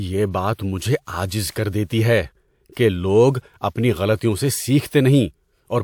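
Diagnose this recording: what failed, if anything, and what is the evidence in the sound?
The failure is at the codec stage: pre-echo from a transform codec. A short hiss runs from 0.54 to 0.59 s, about 50 ms, just ahead of "مجھے عاجز", and the onset that follows sounds softened. A second, shorter smear of about 32 ms sits at 1.53 to 1.56 s, right after "مجھے عاجز". In each case a sharp speech attack fell late in a coding block, and quantisation noise sized for that loud attack spread back across the quiet stretch before it.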